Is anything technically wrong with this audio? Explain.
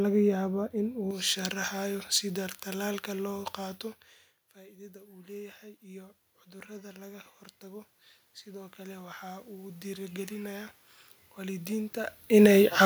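Yes. Two faults are audible.

From 1.11 s to the end, pre-emphasis is left on. The treble was boosted before transmission, and the matching de-emphasis never happened. The curve fits J.17 pre-emphasis. At 10 kHz the level sits about 11 dB above 1 kHz. The speech turns thin and bright. Sibilants hiss and sharpen.

The automatic gain rises twice. The input level drops by about 20 dB each time. The gain control hears this as too quiet and slowly turns itself up. From 4.53 s to 6.11 s it climbs about 6 dB. From 6.66 s to 10.76 s it climbs about 9 dB, more slowly. Speech and room noise swell together. The background noise creeps up with the voice. A talker moving near 3.5 s and 12 s changes the voice level, which is normal and not a fault.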